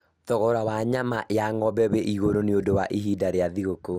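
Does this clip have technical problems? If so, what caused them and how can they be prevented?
Yes. All the way through, this speech has a dull, gurgly, grainy quality, and nothing gets above about 15.8 kHz. That's likely MP2 compression run short of bits: Layer II splits the signal into 32 sub-bands and rations bits between them, so the top bands get switched off and the remaining ones are quantised coarsely, which sounds like a rate around 80 kbps. To prevent it, encode at a higher bitrate or use a more efficient codec.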